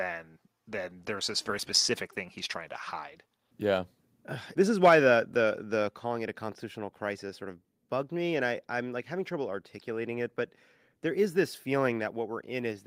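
At 5.88 s the speech and the background behind it drop together by about 3 dB in a single abrupt step and stay at the lower level. This is a microphone volume stepped down, likely the call software cutting the device's input volume in one move.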